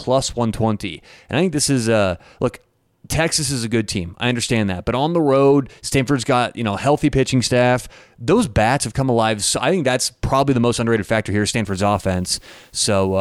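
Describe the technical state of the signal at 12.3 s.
Low bit depth with dither runs from 11.67 s, just after "most underrated factor here", to the end. Only 9 bits remain, and dithered rounding leaves a steady, even hiss roughly 40 dB below the speech.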